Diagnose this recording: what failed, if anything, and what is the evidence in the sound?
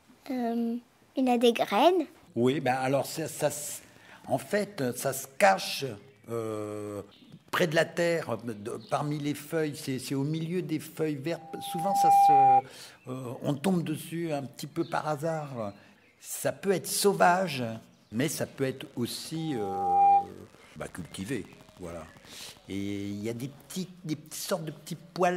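Loudspeaker feedback squeal in the speaker-to-mic loop: a 797 Hz tone swells up within a second at 11.37–12.62 s and 19.37–20.31 s, where loop gain passes one.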